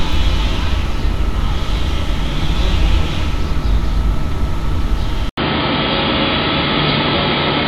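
At 5.29 s, after an 80 ms gap, the sound turns dull and boxy to the end, nothing above 4.8 kHz, with new background noise: likely an input switched to a poorer device.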